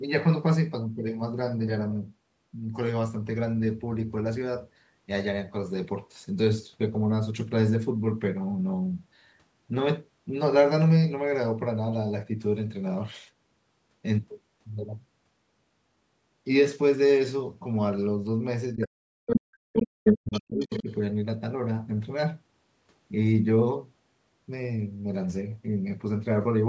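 From 18.75 to 20.89 s the speech drops by up to roughly 40 dB and breaks up: speech suppressed in double talk, likely the echo canceller ducking both talkers at once. Scraps of the other side's voice leak through at 18.82, 19.31, 19.76, 20.05, 20.32 and 20.59 s, faint to slightly louder than the talker, likely loudspeaker echo left uncancelled.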